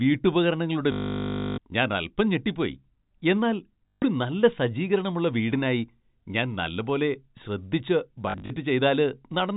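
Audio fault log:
0.92 to 1.58 s, packet loss with last packet repeated: the stream dropped about 0.66 s of audio, and the receiver kept replaying the last packet it had. The repeats do not line up with the pitch, so the run buzzes at about 50 Hz, which fits 20 ms packets, giving a robotic stutter over the narrowband telephone-coded speech.
3.89 to 4.02 s, packet loss with last packet repeated: a shorter gap of about 0.14 s fills the same way, giving a brief buzz.
8.30 to 8.50 s, packet loss with last packet repeated: about 0.12 s is lost in short scattered runs of no more than 40 ms, so the sound breaks into a few quick stutters.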